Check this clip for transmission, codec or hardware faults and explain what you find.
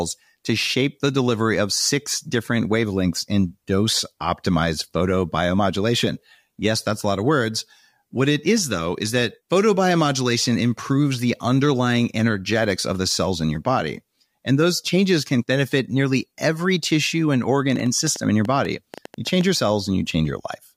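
One fault is present: a train of clicks from 17.72 to 19.42 s, about 7.7 per second at uneven spacing, roughly fifteen in all, standing out above the speech. Same-shaped pulses ticking through pauses too point away from codec distortion, likely toward interference or a faulty connection or supply.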